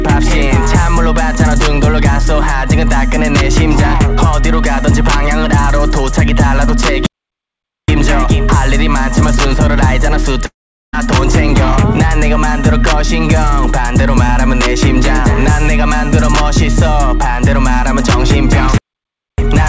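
The audio has passed through a call path, with nothing above 8 kHz, which fits G.722 at 64 kbps. There is a playback stall at 7.06 to 7.88 s and again at 18.78 to 19.38 s. The sound halts for 0.82 s, then 0.60 s, likely because the player's buffer ran dry. A long network dropout runs from 10.46 to 11.06 s. The last sound is stretched into a fading buzz, then silence follows, and about 0.48 s of audio never returns, likely from lost packets.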